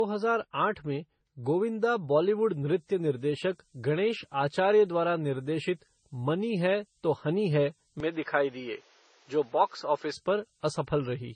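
From the very start, the speech has a smeared, swirly texture with nothing above about 9 kHz, and two distinct kinds of compression damage are layered on each other. This is likely transcoding between lossy codecs: the sound points to a low-rate MP3 encode of around 24 kbit/s later re-encoded as Vorbis at roughly 30 kbit/s. The second encoder spends its scarce bits on the first one's artefacts and adds its own, and the lower bandwidth limit stays.

At 2.36 s a thin, high whistle appears and continues to the end of the clip at 11.36 s. It sits between about 12.5 and 12.75 kHz, wandering slightly within that band, roughly 30 dB below the speech. This is a switching supply whistle. A nearby switching power supply is running in an audible burst mode or beating with another one, and its pitch drifts as its load changes.

From 8.00 s to 10.14 s the sound abruptly turns duller and boxier, with the top end now stopping at about 7.6 kHz and a new background noise floor roughly 35 dB below the speech. 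There is no gap at either transition, and the overall level stays about the same. Then the earlier tone returns. The likely cause is an input switched to a poorer device, where the recording briefly drew from a narrower-band device with its own colouration and noise.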